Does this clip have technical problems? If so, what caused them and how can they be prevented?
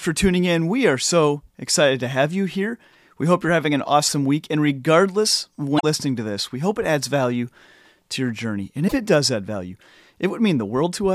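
Yes. Brief glitches at 5.76–5.84 s and 8.87–8.94 s come from damaged data in a compressed stream, where the decoder misreads corrupted frames and resyncs. Verified transfer with checksums or error-correcting containers prevents this.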